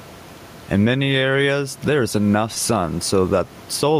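Throughout the speech, the level breathes with gain pumping. The room noise sits about 33 dB below the speech, and the gain swings by around 10 dB. This is likely input gain set far too high, with a fast limiter or compressor clamping down on every loud syllable. Loud and quiet passages sit close together, and the result sounds squashed and restless.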